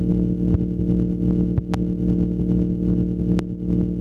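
Input gain set far too high, likely feeding a fast limiter, causes gain pumping throughout, swinging roughly 10 dB, leaving everything squashed. A voltage spike, likely from a plug, switch or static discharge, produces a loud pop from 0.54 to 0.57 s, a double pop from 1.58 to 1.76 s, and another from 3.39 to 3.42 s, each jumping around 20 dB above the sound, which continues underneath.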